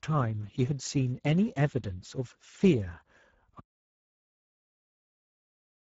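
From the start, the speech passes through the Speex codec at a low setting, which fits a bitrate near 10 kbps. The starved excitation leaves it plainly hoarse and noisy, with nothing above 7.7 kHz. At 3.60 s the input was likely lost, causing an audio dropout to silence: the sound cuts off mid-flow into total, toneless silence that lasts to the end.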